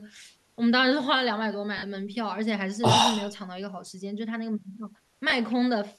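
At 1.78 to 1.83 s and again at 5.30 to 5.32 s the speech smears into brief noisy hiss: lost LE Audio frames, which fits about five and two 10 ms frames. The decoder refills each gap with the previous spectrum under random phase, unlike a clean dropout or stutter.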